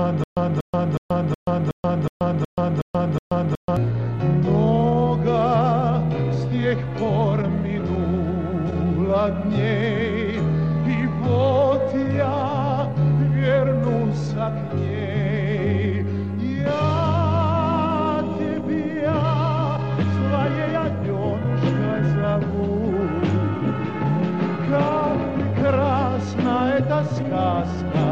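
Stutter with silent gaps, already under way at 0 s and lasting to 3.77 s: one 237 ms fragment repeats nine times, separated by 131 ms of digital silence, likely from a stalled stream.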